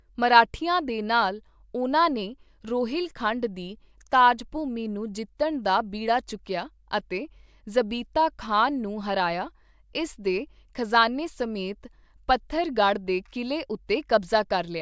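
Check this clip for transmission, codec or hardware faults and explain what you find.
No faults are audible anywhere in this speech recording.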